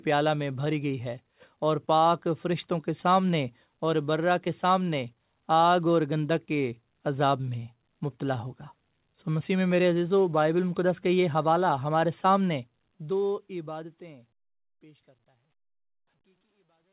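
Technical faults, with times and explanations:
No technical faults can be heard in this recording.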